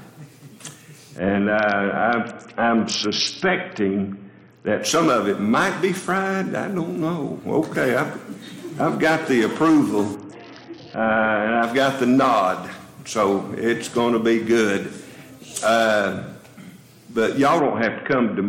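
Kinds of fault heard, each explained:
Bluetooth SBC bit pool drop: The treble goes dull and a gritty noise rises from 1.18 to 4.82 s, 10.15 to 11.63 s and 17.6 s to the end. A congested link made the sender starve the upper sub-bands, which fits the bit pool falling from 31 to 6, near 55 kbps.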